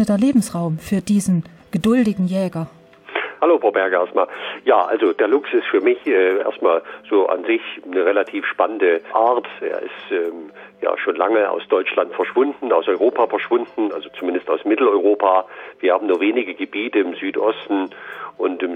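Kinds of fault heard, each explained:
Nothing stood out as a fault on listening to this audio.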